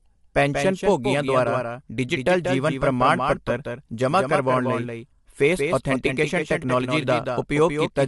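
A second capture path or a misaligned edit has likely mixed this speech clip in twice: the doubled audio track runs throughout, with a full-band copy roughly a fifth of a second behind and about 5 dB quieter, giving a dry, slapback-like echo with no room decay. The speech was also likely coded with low-delay AAC compression of the AAC-ELD kind, at a rate that fits 32 kbps. Its low bitrate leaves the whole clip plainly rough and grainy, with noise between harmonics and nothing above 11.6 kHz.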